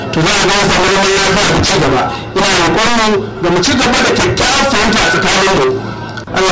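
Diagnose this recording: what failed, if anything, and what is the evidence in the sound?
Nothing failed; no audible fault anywhere in this recording.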